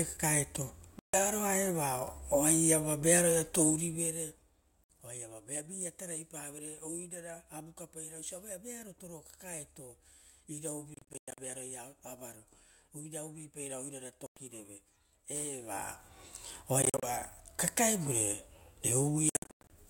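Speech with gaps at 0.99 to 1.14 s, 4.84 to 4.90 s, 10.94 to 11.38 s, 14.26 to 14.37 s (right after "avaro oirara"), 16.82 to 17.03 s and 19.29 to 19.70 s, likely a Bluetooth dropout, with packets not arriving in time. The third, fifth and sixth are broken up into several short holes rather than one. The speech resumes further along, as if it had kept playing, which separates these from pauses or edits. From 15.5 to 16.08 s a level change of around 15 dB is made in 1 dB steps, about fifty times a second, producing zipper noise. Each unsmoothed step clicks, so a fine ticking rides on the speech.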